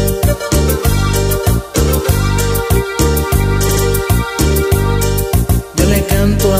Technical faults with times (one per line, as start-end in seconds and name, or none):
3.69-3.84 repeated frames
5.49-5.64 repeated frames